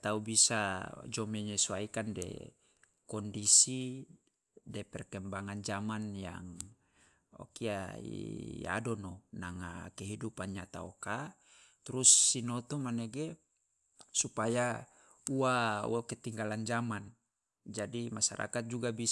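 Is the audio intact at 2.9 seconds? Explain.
Yes, at 2.9 seconds the speech plays through intact, with no dropout, click, distortion or other fault at that moment.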